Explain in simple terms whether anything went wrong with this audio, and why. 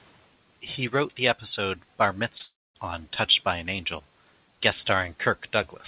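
Two things went wrong, one right after the other, a little past the two-second mark.

The first is a short concealed packet loss at 2.38 s. About 20 milliseconds of the call never arrived. The receiver papered over the gap by stretching out the sound just before it, then slid back into the real audio. You hear it as a tiny smear or wobble. Any short sound in that spot could be lost.

The second is a longer break from 2.43 s to 2.76 s, about a third of a second. The speech stops. A brief fading buzz or hiss fills the start of the gap. Then about a quarter second of silence follows. After that the speech picks up further on, and the missing part never comes back. This pattern points to a long network dropout as the likely cause, where nothing got through for that stretch.

Throughout, the sound has no content above 4 kHz. That fits a standard phone-call codec.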